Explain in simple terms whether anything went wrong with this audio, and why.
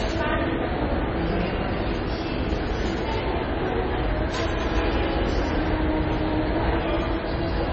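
Throughout, the sound is dull and watery, with nothing above 7.9 kHz. Heavy MP3 compression likely cut away the treble and made faint details flicker.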